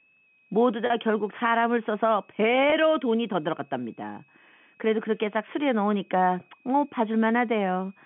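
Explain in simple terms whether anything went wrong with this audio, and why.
Two things went wrong here. First, there's a switching supply whistle running the whole way through. It's a faint, high tone hovering around 2.5 to 2.6 kHz. A power supply somewhere in the chain is switching at a rate low enough to land in the hearing range, so it leaks in as a thin whine under the speech. Its pitch wanders slightly within that range instead of sitting perfectly still.

Second, there are two brief dropouts handled by packet loss with pitch repetition. At 0.86 s a chunk of about 40 ms goes missing, which fits a couple of lost packets. At 2.70 s a shorter gap of about 20 ms, roughly one packet's worth, drops out. In both spots the receiver filled the hole by replaying the last bit of voice pitch, so you hear a tiny held, slightly buzzy moment instead of a clean break. Both are short enough that the speech picks straight back up. 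The telephone-band coding underneath just gives the usual narrow phone sound.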